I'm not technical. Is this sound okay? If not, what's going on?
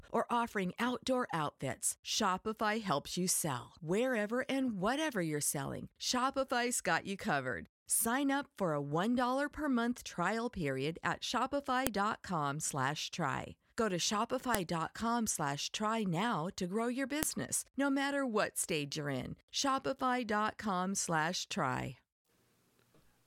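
No. There are three sharp, loud clicks or snaps, at about 11.87, 14.55 and 17.23 seconds. The last one falls right between "now to grow your" and "no matter what stage". This is a file header played as audio. The recording appears to have been stitched together from separate pieces, and each piece's hidden file information at its start was left in and played as sound. That is why a snap marks each join.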